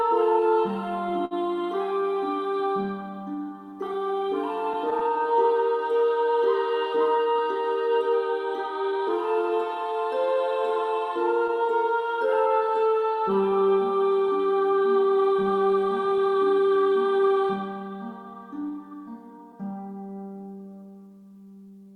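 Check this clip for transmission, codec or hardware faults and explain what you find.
Three transmission faults are present, all related to timing between sender and receiver.

Clock drift between sender and receiver runs throughout: the sender's clock is about 5 percent slower than the receiver's. The receiver's jitter buffer keeps draining, so playback can't hold a steady pace and small timing irregularities recur across the clip.

Repeated timing corrections span nearly the whole clip, from 0.01 s to 21.85 s. To compensate for the slow sender, the receiver repeatedly duplicates short pieces, playing at 95 percent speed and adding around a second overall. This is heard, if at all, as uneven tempo and slight hiccups.

Short stalls from late packets occur at 1.25 s and 11.47 s. Each time a packet arrives late, the buffer empties and the last sound is stretched until it arrives: 57 ms at the first, 17 ms at the second. 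Nothing is lost, but a sound briefly hangs.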